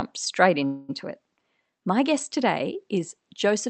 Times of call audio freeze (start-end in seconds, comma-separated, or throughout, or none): 0.65-0.91